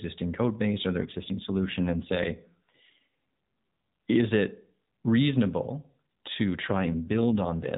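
From 1.0 to 3.06 s and again from 6.68 to 7.75 s, an AMR rate drop cuts the mobile codec's bit budget, consistent with falling from 12.2 to 5.9 kbps. The narrowband speech keeps its band without gaps, but turns rougher and more synthetic until the rate recovers.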